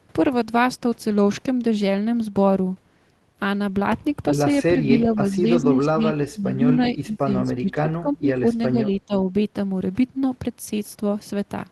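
A speech clip over a call link, and the talker keeps getting ducked in what's likely speech suppressed in double talk: from 4.7 to 6.04 s it dips by about 10 dB, from 6.21 to 8.44 s it drops harder, about 20 dB, then again around 8.7 to 9.14 s by about 15 dB. That's the canceller turning everything down because it can't tell this talker from loudspeaker echo. At 6.83 to 6.9 s there's a brief scrap of what's likely echo leak, a delayed copy of the voice about 378 ms behind and about 15 dB under the speech, leftover loudspeaker pickup the loudspeaker side's canceller let through.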